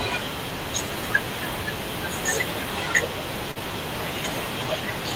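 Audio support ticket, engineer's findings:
Short concealed packet loss, 3.51–3.58 s. Brief smeared wobble mid-speech. Network/jitter buffer side: roughly 40 ms never arrived in time; decoder extrapolated the previous sound to fill the gap, then cross-faded back into received audio.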